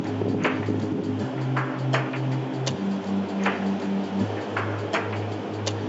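No technical faults are audible.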